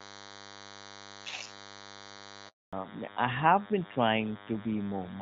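DECT cordless phone buzz runs from start to finish. A nearby DECT handset or base transmits a brief radio burst every 10 ms, and the audio circuitry rectifies each burst into a click. Repeated at 100 Hz, the clicks form a thin, steady buzz rich in harmonics. It sits at roughly 15 dB below the speech, laid over clean wideband speech consistent with AMR-WB near 12.65 kbit/s.

A handover gap opens at 2.49 s and lasts 240 ms, to 2.73 s. The call was passed from one network to another, and during the switch no speech frames got through. The voice fades out within a few tens of milliseconds and then goes silent until the new link carries audio again. Any speech spoken during that quarter second is simply missing.

Fallback to narrowband follows at 2.73 s and continues to the end. When the new link came up, the call dropped from HD Voice to an older narrowband codec, consistent with AMR-NB at 12.2 kbit/s. 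Nothing above 4 kHz survives, so sibilants lose their crispness and the airy top of the voice disappears. Compared with the first half of the clip, the speech turns duller and more muffled, with a rougher texture.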